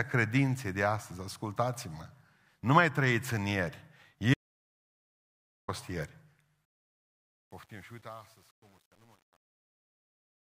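Right after "mai trăiți în ieri" at 4.34 s the speech drops out to dead silence until 5.68 s, about 1.34 s gone, most likely a lost input. From 6.65 s the fade-out shows truncation distortion: the level steps sound like only about 9 bits survive, so from 7.01 s to the end the tail turns gritty.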